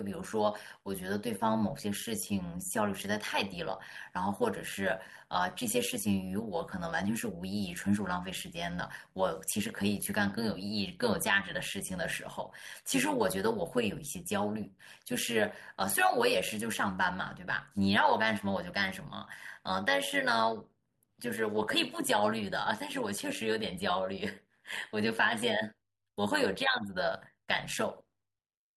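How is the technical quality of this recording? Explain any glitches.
The recording carries one processing fault that runs through the whole clip. Overlap-add ripple is present from start to finish: the speech was split into windowed frames and rebuilt with overlaps that don't sum to a steady gain, so the level swings by about 11 dB once per frame, around 100 times a second, giving the voice a metallic buzz with extra tones around it.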